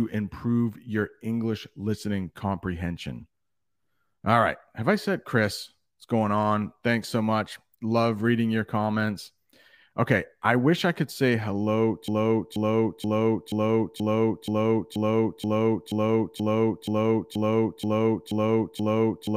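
From 12.08 s, right after "I could say hello", a broken-record loop sets in: one 480 ms fragment repeats exactly, back to back, to the end, likely a stalled stream resending its last piece. Waveform and spectrogram show identical blocks tiling at that interval.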